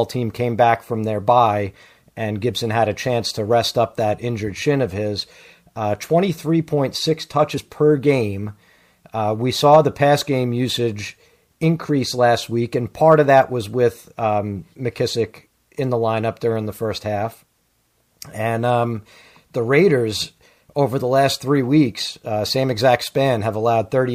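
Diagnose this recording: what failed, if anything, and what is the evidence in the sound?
The failure sits at the codec stage: damaged data in a compressed stream. From about 7.54 to 7.58 s, just before "per game", a brief disturbance of about 40 ms breaks into the speech. Corrupted bytes in the compressed data made the decoder misread those frames and lose sync until it found the next valid frame header. A plain network dropout would instead give silence or a smoothed-over gap.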